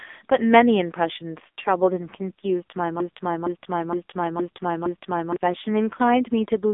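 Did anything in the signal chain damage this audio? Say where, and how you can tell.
Yes, the codec stage did: AMR narrowband mobile codec compression cuts everything above 3.7 kHz, and heavy buzzy, synthetic voicing points to a very low bitrate near 6 kbps.

A broken-record loop, likely from a stalled player or stream buffer, replays one 0.46 s fragment five times from 3.00 to 5.36 s, losing the speech underneath.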